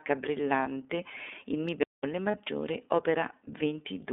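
The whole clip has gone through the iLBC codec. Speech sits between 250 Hz and 3.6 kHz and sounds noticeably rough and synthetic, which fits the 13.33 kbps mode with 30 ms frames.

At 0.63 to 0.67 s there's a lost iLBC frame: about 30 ms gets filled by a repeated pitch cycle plus noise, a short buzzy held vowel before things snap back.

From 1.83 to 2.04 s comes a playback stall. The output drops to silence for about 205 ms and then carries on, likely because the player ran dry or its thread got blocked.

A second lost iLBC frame at 2.31 to 2.35 s gives the same brief buzzy patch over 30 ms, recovering right away.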